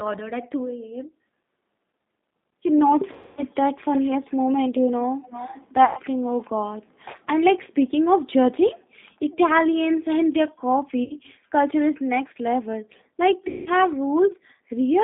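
Throughout the 15 s of speech, the G.729 codec is plainly audible. The line is confined to roughly 200 Hz to 3.7 kHz, and inside that band the voice has a rough, slightly synthetic grain. The coder keeps only a vocal tract filter, a pitch track and a sparse pulse excitation, which fits an 8 kbit/s G.729A stream. Unlike simple low-pass filtering, the damage is in the texture itself, not merely a muffled sound.

VoIP packet loss concealed by the speech codec breaks in at 3.13 to 3.43 s, 5.85 to 6.00 s, 11.04 to 11.14 s and 13.48 to 13.69 s. About 240, 120, 60 and 180 ms of audio are missing, in keeping with groups of 30 ms packets. The decoder stretches the last pitch and filter state into a buzzy tone or coloured noise that fades. What separates this from plain dropouts or clicks is that there is no hard edge, and the voice stays weak and warped briefly after each gap.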